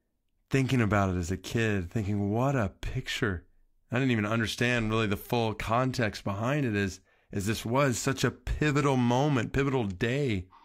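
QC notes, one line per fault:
No technical faults can be heard anywhere in the speech signal.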